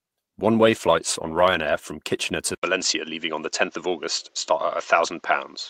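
A call bitrate drop runs from 0.6 s to 1.89 s. The connection's bandwidth estimate fell, so the encoder was told to work with far fewer bits, going from 40 kbps to 16 kbps and staying at that floor for about 1.23 s. With so little data the speech is coded more coarsely and its upper frequencies are trimmed. It turns rough and watery, then regains its detail once the rate climbs back.

At 2.55 s an input switched to a poorer device takes over and holds to the end. An 80 ms silence marks the changeover, and the sound then carries nothing above 7.6 kHz, so it comes across duller and boxier. A faint new background noise, well beneath the speech, also appears, while loudness stays about the same. The most likely cause is that the system changed microphones mid-recording, moving to a device with a narrower band and its own noise floor.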